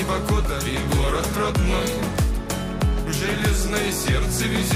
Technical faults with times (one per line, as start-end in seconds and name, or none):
none